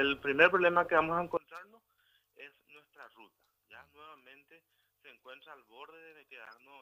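From 1.37 s to the end, the sound drops by about 26 dB and turns faint, with its centre largely gone. This is likely one channel inverted: with one side's polarity flipped, the shared content cancels when summed, leaving only the faint difference between channels.

At 6.45 to 6.50 s a short glitch cuts through, peaking somewhere around -35 dBFS. This is a corrupt frame decoded: damaged data in roughly two compressed frames was played anyway, scattering energy to wrong frequencies for those 40 ms or so.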